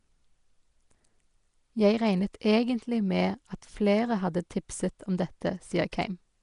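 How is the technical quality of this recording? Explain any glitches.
Quality is poor, with one fault running through the whole recording. The speech carries a rough, hissy halo and a smeared, underwater tone throughout. That plainly audible damage is likely Nellymoser compression, at a rate that fits about 44 kbps. It gives fixed, scarce bits to short blocks and fills starved bands with noise. A spectrogram shows nothing above 10.6 kHz and grainy noise patches in place of clean harmonics.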